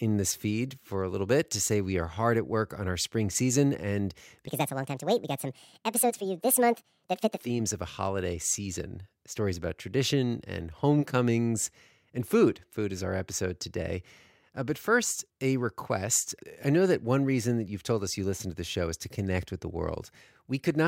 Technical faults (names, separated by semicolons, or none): section at the wrong speed